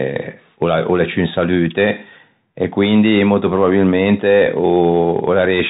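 Throughout, the speech carries Bluetooth CVSD headset codec damage. Nothing passes above 3.8 kHz. The one-bit step lags, so s sounds scratch over granular hiss.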